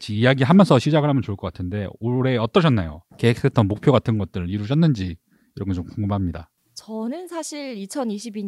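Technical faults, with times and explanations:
No technical faults can be heard in this speech recording. There is nothing here to mark with a time or explain.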